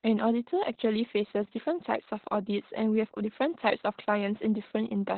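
Opus voice compression runs throughout the speech. The SILK coder has narrowed the band, leaving nothing above about 4.4 kHz, and coded the excitation coarsely, which fits a bitrate around 8 kbps. The voice sounds heavily muffled, hoarse and slightly robotic.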